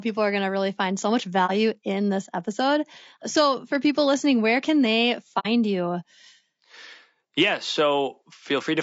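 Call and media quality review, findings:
Speech throughout rough and grainy, noise filling between harmonics, lowered or synthetic top band; likely low-delay AAC compression near 32 kbps. Spectrogram: smeared harmonics, patchy upper band.

AAC frame loss with muting, 1.46–1.51 s and 5.39–5.47 s: soft-edged dropouts, roughly one and two frames; decoder zeroed spectrum. Waveform tapers to silence; spectrogram shows blank vertical gaps.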